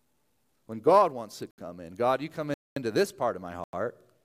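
Speech with three blocks of digital silence, at 1.51 s (about 71 ms, after "wants to"), 2.54 s (about 224 ms, after "you come") and 3.64 s (about 93 ms, after "this part of my", which fits a 4096-sample buffer left unfilled). Unlike a faded dropout, each gap cuts out and back with no fade.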